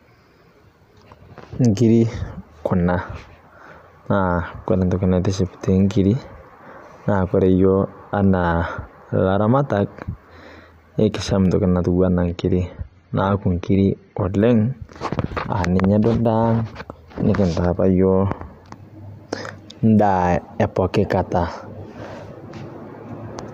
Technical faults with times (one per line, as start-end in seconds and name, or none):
12.26-14.26 adaptive stream at a lower bitrate